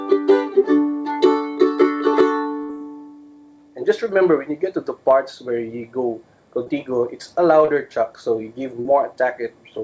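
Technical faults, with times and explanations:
2.63 to 2.72 s, burst of packet loss: about 60 ms of audio never arrived. The receiver spent 63 ms extending the last sound and fading it into a held buzz or thinning hiss, then dropped another 14 ms to catch up before the real audio resumed further on. On a spectrogram the harmonics or noise stop changing and flatten into smooth horizontal bands that fade out under the 8 kHz ceiling of the call path. The waveform shows a repeated pattern shrinking in amplitude, followed by an abrupt change where live audio returns.
6.64 to 6.69 s, 7.65 to 7.75 s and 8.82 to 8.93 s, short concealed packet loss: each time, about 30 ms went missing, and the decoder filled 22, 22 and 28 ms by continuing the preceding pitch or noise before crossfading back. Each one is heard as a brief smear or wobble, and the last two also stretch the timing by a few milliseconds. 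On a spectrogram, each gap is a short stretch of unnaturally steady bands or a noise patch. The waveform shows a brief repeated cycle and a slight discontinuity at the blend.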